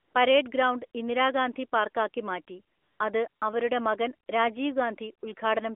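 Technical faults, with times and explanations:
0.00–0.14 s, 2.76–3.00 s, 3.28–3.42 s, AMR comfort noise: in pauses before "പരേഡ് ഗ്രൗണ്ട് ഇന്ദിരാഗാന്ധി പാർക്കാക്കി", after "ഗ്രൗണ്ട് ഇന്ദിരാഗാന്ധി പാർക്കാക്കി മാറ്റി" and after "ഇന്ദിരാഗാന്ധി പാർക്കാക്കി മാറ്റി അത്", speech frames stop and the real background is replaced by smooth synthetic hiss that switches abruptly in and out, within the 250 Hz–3.5 kHz phone band.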